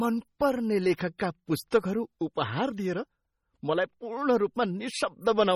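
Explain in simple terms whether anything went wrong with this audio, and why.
Yes. The speech sounds watery and swirly all the way through, with smeared edges, most likely from heavy MP3 compression that threw away sound detail to save space. At 1.18 s, and again at 1.71 s just before "उपहार दिएर", a short hiss comes before a sharp sound. This is pre-echo: the compression spread its noise across a short block, so it leaked in ahead of the attack.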